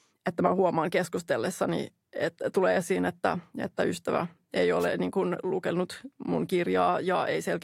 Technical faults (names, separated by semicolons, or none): wireless microphone noise hit